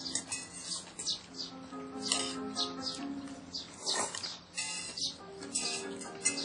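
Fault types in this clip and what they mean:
WMA compression: likely a low-bitrate WMA encode, fitting roughly 32 kbps, discarding weak detail, so the sound rings and washes with breathing hiss and nothing above 10.1 kHz.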